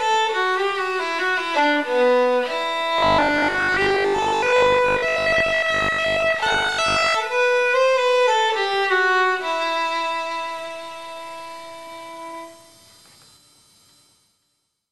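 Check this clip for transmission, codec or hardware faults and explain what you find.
One fault is present: robotic sound from repeated short buffers, from 2.98 to 7.14 s. A rigid metallic buzz at 50 Hz is heard, likely because audio arrived too slowly and the last 20 ms kept being looped, replacing roughly half the real signal. On a spectrogram, evenly spaced harmonics at multiples of 50 Hz appear; the waveform shows identical 20 ms cycles repeating.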